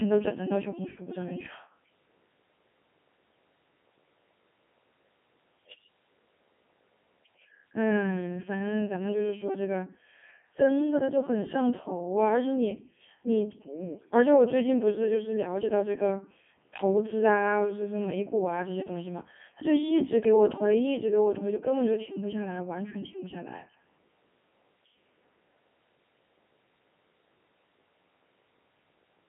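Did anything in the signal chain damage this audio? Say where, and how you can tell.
Yes. Codec 2 vocoder throughout, at the codec stage: buzzy, robotic speech within 250 Hz–3.4 kHz, fitting a 3.2 kbit/s mode, rebuilt from sine waves rather than the original waveform.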